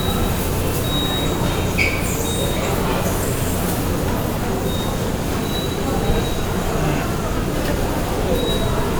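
No technical faults are audible in this recording of sounds.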